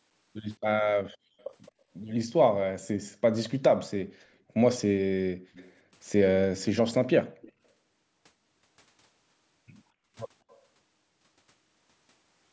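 A speech recording in which a faint delayed copy of the talker, most likely an echo leak from a far-end loudspeaker that the echo canceller did not fully remove, trails the speech by 215 ms at 1.39–1.72 s, 4.79–7.52 s and 10.49–10.62 s, sitting roughly 25 to 35 dB below it. The fixed offset and distinct repeat set it apart from room reverberation, which smears continuously rather than repeating. The background is also gated by the echo canceller. Room sound dips while the speech carries on, unlike a network dropout: by up to about 40 dB between 4.05 and 5.54 s, by about 12 dB at 7.24–7.39 s, and by about 31 dB at 9.96–10.09 s, before returning.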